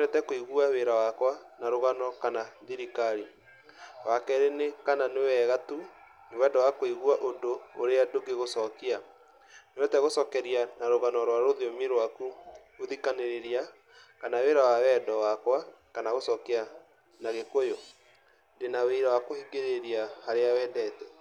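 No technical faults turn up anywhere in this speech recording, so there's nothing here to flag.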